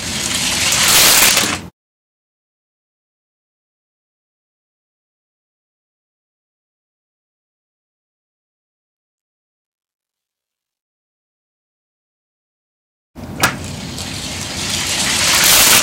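Integer overflow strikes from 0.72 to 1.44 s, again at 13.43 s, and from 15.33 to 15.79 s. Loud peaks pushed the signal about 6 dB past the integer ceiling (about 4 dB at 13.43 s), and instead of being held at the limit the values wrapped around to the opposite extreme. Each such peak jumps across the whole range, producing harsh, violent cracks far sharper than ordinary clipping, brief at 13.43 s and sustained through the longer stretches.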